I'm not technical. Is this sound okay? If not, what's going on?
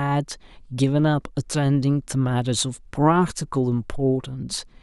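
Yes, nothing in this recording stood out as a problem when I listened to it.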